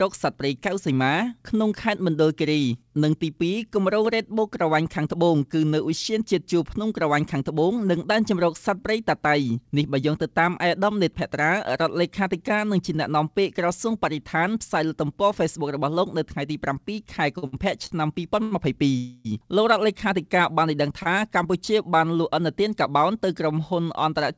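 At 17.38 s, 17.46 s, 17.86 s and 18.43 s the sound briefly hangs. Each is a short stall from a late packet. A packet missed its slot and the jitter buffer ran dry. The receiver stretched the last sound to cover the wait, for 44 ms, 61 ms, 41 ms and 87 ms. Then playback resumed from the same point. Nothing is lost. Each one is a small smear or buzzy hold.

From 18.97 s to 19.27 s comes a longer hold of 275 ms. This is a call audio freeze. The last sound is carried on as a fading buzz, without dropping to silence. It likely comes from packets held up in transit, emptying the buffer until they arrived. The audio then picks up where it stopped, so a gap is inserted but nothing is missing.

At 21.03 s a final short stall from a late packet holds the sound for 26 ms. Throughout, nothing above 8 kHz is present, which fits a wideband call codec such as G.722.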